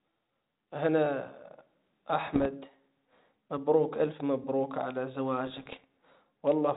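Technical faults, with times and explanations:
2.34 to 2.47 s and 5.47 to 5.84 s, bit errors on an ADPCM link: a short cluster of pops and rough crackle hits first, then a longer ragged burst right after "مبروك الف مبروك على", with the level jumping briefly. At a bit error rate under 1 percent, each corrupted code word also throws off the decoder's adaptive step size and prediction. The error smears on for some milliseconds, inside a band-limited telephone path that fits 32 kbit/s G.726.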